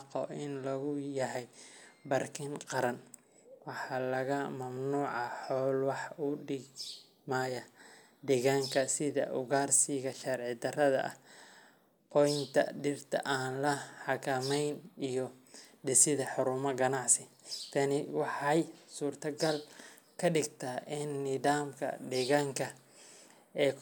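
Listening through the speech recording, nothing stood out as a technical problem at any point.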